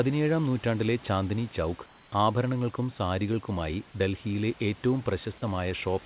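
From 1.86 to 2.12 s, after "നൂറ്റാണ്ടിലെ ചാന്ദ്നി ചൗക്ക്", the sender likely paused transmission in the silence and the receiver substituted comfort noise in place of the background. For 260 ms the room sound becomes a flat, detail-free hiss, about 2 dB quieter and band-limited to below 4 kHz like the rest of the call audio. The real background returns with "ആഭരണങ്ങൾക്കും സാരികൾക്കുമായി ഡൽഹിയിലെ ഏറ്റവും".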